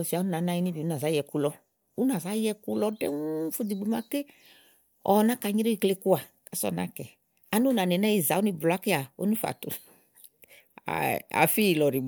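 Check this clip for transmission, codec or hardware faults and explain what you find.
Nothing stood out on listening to this speech.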